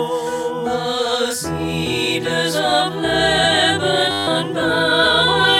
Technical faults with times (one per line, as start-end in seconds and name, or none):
4.11-4.27 system hang loop